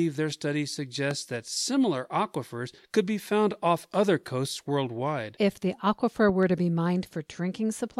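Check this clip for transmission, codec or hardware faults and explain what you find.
Two loud pops interrupt the speech: a single sharp pop at 1.11 to 1.13 s, standing well above the speech, and a double pop at 6.29 to 6.45 s, somewhat above it. A voltage step, likely from a switch, plug or static, is added to the signal. Unlike a dropout, the speech carries on unbroken beneath each pop.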